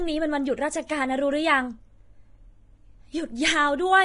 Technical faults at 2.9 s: Vorbis compression

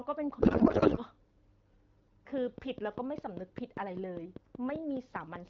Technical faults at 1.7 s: none

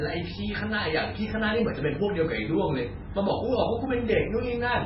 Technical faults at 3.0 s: MP3 compression

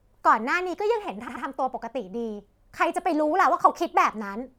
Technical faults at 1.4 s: repeated frames

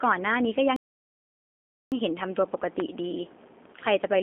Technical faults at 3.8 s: G.729 codec

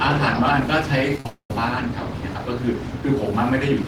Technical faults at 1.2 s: repeated packet loss (robotic sound); long network dropout

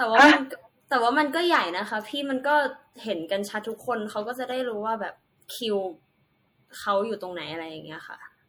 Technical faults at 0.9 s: MP3 compression

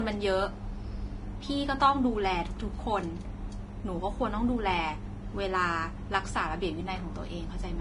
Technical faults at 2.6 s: Vorbis compression

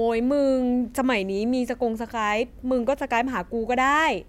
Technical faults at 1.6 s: none

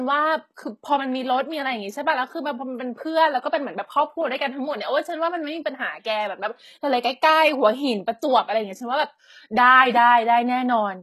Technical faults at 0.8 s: HE-AAC compression

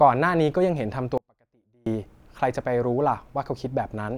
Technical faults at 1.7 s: audio dropout to a faint residue

